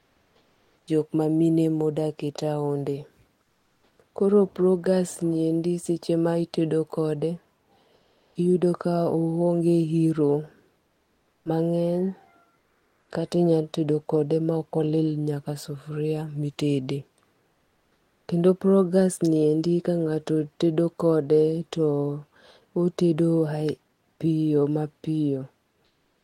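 Comfort noise in place of the background at 0.00–0.87, 3.43–3.99 (after "ma odak e taonde"), 7.95–8.35, 10.87–11.45, 12.59–13.09, 17.51–18.27 (after "sufria mitede") and 25.85–26.24 s: the pauses between speech carry a steady, featureless hiss instead of the real room sound. It is about 4 to 7 dB quieter than the background around it, except at 7.95 s, where the level holds. This is likely discontinuous transmission, with Opus DTX synthesising noise while the sender is silent.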